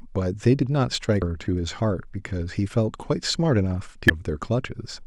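A buzz at about 43.1 Hz runs through the whole speech clip. This is a block size mismatch (truncated). One stage writes longer blocks than the next one reads, and the tail of each block is dropped. The buzz rate fits 1024-sample blocks. The speech keeps its normal speed.

At 1.21 s and again at 4.09 s there is a brief blip. Each comes from damaged data in a compressed stream. The decoder misreads the corrupted frames and loses sync. It then hunts for the next valid frame header, and the misread frames and lost sync produce the short artefact.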